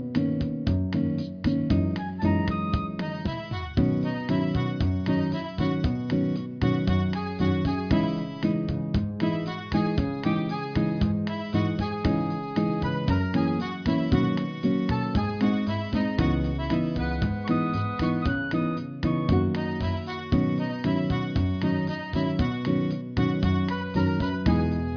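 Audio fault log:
Nothing to log here, as there's no fault anywhere in the clip.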